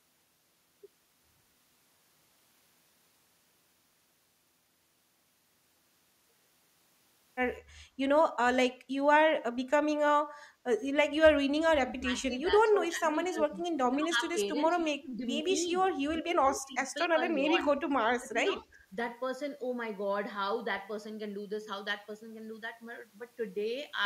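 Speech suppressed in double talk cuts into this speech clip eight times: 11.44–12.09, 12.29–14.37, 14.54–15.25, 15.42–15.48, 15.68–15.80, 16.00–16.77, 17.04–17.63 and 17.95–18.79 s. The talker's level sinks by roughly 5 to 25 dB, hardest in the bursts starting at 11.44 and 16.00 s. The likely cause is an echo canceller that could not separate its own talker from loudspeaker echo while the far side spoke, so it turned both down.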